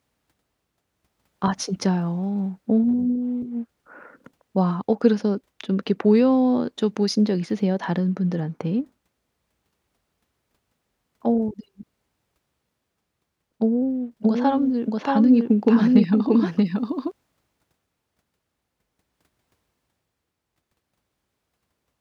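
From about 14.23 s to 17.11 s the speech gets a doubled audio track: a second full-band copy trails the original by roughly 0.7 s, at about the same loudness, so each phrase is chased by itself and the two overlap into a muddle. There's no reverb tail or room colour on the copy, and it drops in and out abruptly at those edges. That's most likely a second, slower capture path mixed in alongside the main one.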